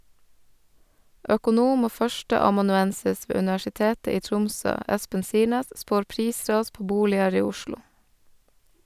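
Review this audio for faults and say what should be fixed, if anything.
Nothing stood out on listening to the speech, so there is nothing here that needs fixing.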